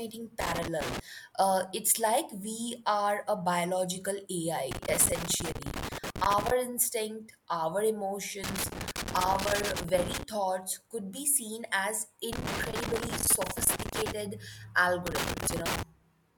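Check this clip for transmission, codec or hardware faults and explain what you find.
The speech is hit by loose connector crackle five times: 0.41 to 0.99 s, 4.71 to 6.51 s before "instinct our", 8.44 to 10.23 s before "thoughts could be seen", 12.33 to 14.12 s after "could be seen as", and 15.07 to 15.83 s. A worn or dirty contact keeps making and breaking, chopping the signal and popping wherever DC sits on the line. The result is irregular bursts of scratchy crackle, unlike steady vinyl crackle or evenly spaced digital clicks.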